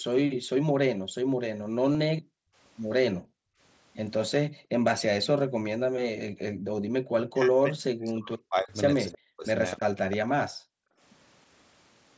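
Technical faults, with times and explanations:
0.31–6.84 s and 10.5–11.0 s: background gated by the echo canceller. The room sound behind the talker dips by up to about 40 dB and returns, adding up to roughly three seconds in the first stretch and half a second in the second. While the far side played through the loudspeaker, the echo canceller clamped the microphone hard, then released it.
1.93–1.95 s: concealed Bluetooth headset packet loss. A brief buzzy, slightly held tone replaces about 22.5 ms of sound, which fits three lost headset frames. The receiver filled the gap by repeating the best-matching recent stretch of waveform, with a faint warble as real audio resumes.
7.12–9.45 s: speech suppressed in double talk. The talker's voice dips by roughly 40 dB, for about two seconds in total. The likely cause is both sides speaking at once, so the echo canceller could not tell its own talker from loudspeaker echo and turned everything down.
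9.08–10.17 s: echo leak. A second copy of the voice trails the original by about 314 ms, roughly 15 dB quieter. Its likely source is a loudspeaker at one end whose echo canceller left part of the pickup unremoved, so the remnant was sent back down the call.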